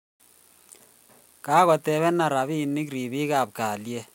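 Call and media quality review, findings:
No audible faults found in this speech recording.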